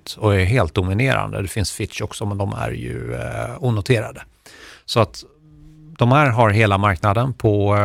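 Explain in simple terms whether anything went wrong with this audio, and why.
Nothing went wrong here; no faults can be heard.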